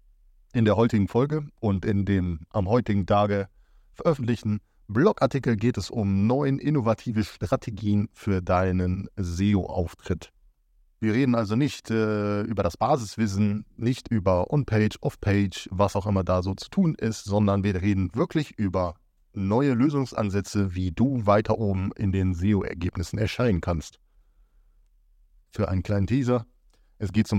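No technical faults can be heard anywhere in the speech recording. Nothing in the signal stands out at any point that would call for a time or a closer look.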